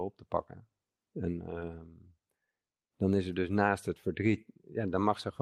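At 4.25 s, just after "er dus naast het", the speech turns briefly rough and grainy until about 4.35 s. This is a lost packet rebuilt from error correction. Roughly 60 ms of audio went missing, which fits three lost 20 ms packets. The packets that followed carried low-bitrate backup copies, and the decoder played those instead. There is no gap or dropout. The rebuilt stretch is coarser and noisier than the speech around it.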